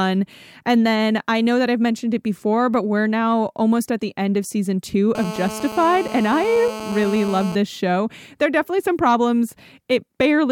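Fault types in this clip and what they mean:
GSM phone buzz: a 2G handset sitting close to the gear is sending its radio bursts about 217 times a second, and the audio circuitry rectifies those pulses into a hard, raspy buzz full of harmonics that has nothing to do with the speech. Here it kicks in right after "end of season two" at 5.15 s and runs steadily, as during a call, until 7.55 s, just before "this show", sitting about 12 dB below the speech.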